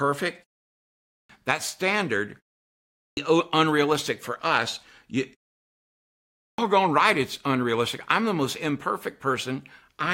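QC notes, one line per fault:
0.86–1.29 s, 2.71–3.17 s and 6.18–6.58 s: clipped start after a pause. Each time the speech comes back after a gap (0.5, 0.38 and 0.91 s of quiet), the output seems to have dozed off and needs roughly 0.4 to 0.46 s to wake and lock again, so the opening of each phrase is simply gone and the talker jumps in mid-sound out of dead silence.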